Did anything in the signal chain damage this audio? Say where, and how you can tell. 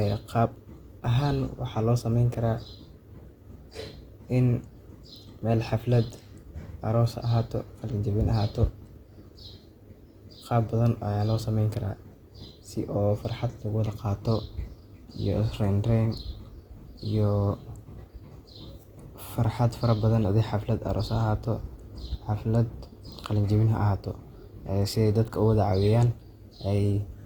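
Yes, at the codec stage, throughout the clip. The speech turns rough and grainy, with noise replacing clean tonal detail. Yet sound still reaches about 20.2 kHz. This is likely Opus compression in music mode, filling starved bands with folded or noise energy. That fits roughly 24 kbps.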